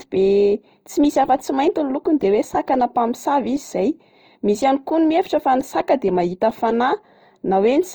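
Across the whole speech clip the sound is grainy and rough, with a noisy, sandy edge on sustained sounds. This points to low-rate Opus compression, likely in its music mode near 24 kbps, filling starved bands with noise.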